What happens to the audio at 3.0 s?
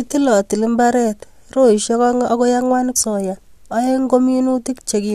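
A stream segment skipped is the likely cause: one segment of the segmented stream appears to have failed to load, and the player moved straight on to the next one. At about 2.95 s, right after "roisiek oeng akoi ang'wan", the speech jumps abruptly forward with a brief blip, lasting only a moment. The material that should have followed is simply absent, so the speech resumes further along without any gap.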